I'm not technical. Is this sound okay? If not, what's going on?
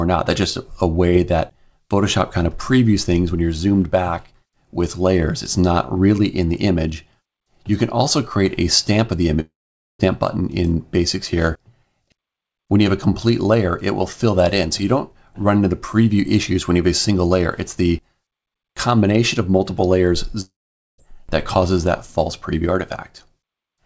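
No, there are two spots where the sound briefly drops out. At about 9.40 to 10.01 seconds, and again at about 20.41 to 21.00 seconds, the audio turns into a short fading buzz and then goes quiet for roughly half a second before picking up again, with that bit simply gone. That's a long network dropout, likely caused by the connection stalling so nothing reached the listener, and the call software tried to cover the gap before giving up.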